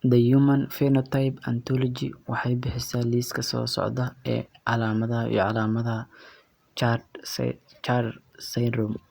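No technical faults can be heard anywhere in the speech.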